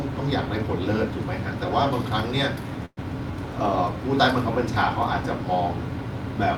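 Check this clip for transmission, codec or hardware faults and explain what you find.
One transmission fault is present: a call audio freeze from 2.85 to 2.99 s. The final sound before it smears into a decaying buzz, ending in roughly 40 ms of silence. The speech then resumes exactly where it stopped, with nothing lost, but 116 ms later than before. The likely cause is late packets emptying the jitter buffer, so the receiver filled the wait rather than discarding audio.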